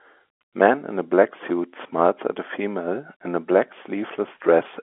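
There are no technical faults to describe in time order; the speech comes through an ordinary telephone channel with its narrow band intact.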